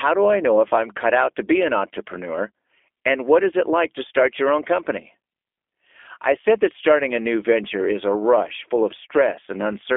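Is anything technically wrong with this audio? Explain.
Yes. The whole clip carries the sound of the G.729 codec, likely the G.729A variant. The speech is rebuilt from a model rather than passed through. A vocal tract filter, a pitch predictor and a few pulses per short frame stand in for the original wave. The result is intelligible but rough and slightly synthetic, and the damage is plainly audible. The band is narrow, roughly 300 Hz to 3.5 kHz, with nothing above 3.7 kHz. This fits an 8 kbit/s telephone codec.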